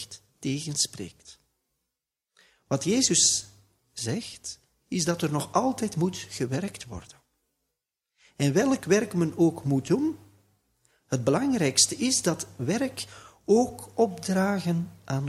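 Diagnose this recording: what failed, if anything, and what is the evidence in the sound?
Nothing failed here; I listened all the way along and didn't hear anything going wrong at any stage of the chain.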